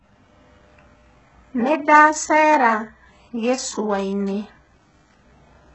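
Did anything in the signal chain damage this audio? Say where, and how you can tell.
Yes. Throughout the speech the treble sounds synthetic: sibilants come out gritty and lispy, and nothing reaches above 8 kHz. The stage is the codec, likely HE-AAC compression at a very low rate, which fits about 8 kbps. Only the lower band is coded, and copied upper bands replace the real treble.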